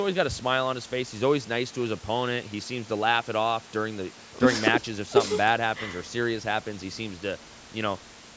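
There are no technical faults to describe in time order; the speech has simply passed through a call's microphone processing, which leaves nothing above 8 kHz.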